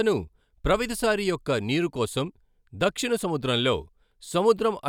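No technical faults occur at any point in the speech, so there is nothing to describe in time order.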